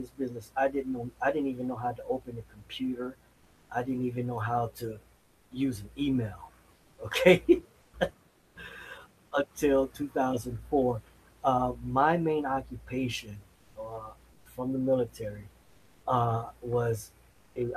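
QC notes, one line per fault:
5.17–5.51 s (after "even know how to"), 7.81–7.93 s, 8.29–8.55 s, 14.33–14.45 s and 17.31–17.55 s, comfort noise in place of the background: pauses lose their room detail and become flat, featureless hiss about 1 to 4 dB quieter, likely Opus discontinuous transmission substituting synthetic noise.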